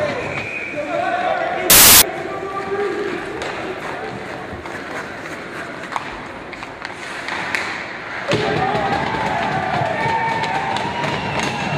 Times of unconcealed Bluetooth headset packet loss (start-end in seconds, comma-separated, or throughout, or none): none